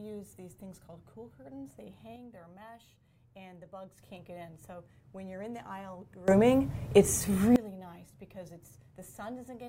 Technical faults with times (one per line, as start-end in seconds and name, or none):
2.16-3.98 sudden gain jump
6.28-7.56 sudden gain jump